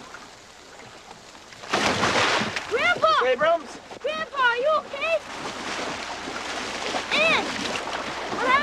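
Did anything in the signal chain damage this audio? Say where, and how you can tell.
Yes, there's a skip at 5.53 s, with a few tens of milliseconds gone and butted together. It's likely audio missing between chunks at a 3-second buffer boundary.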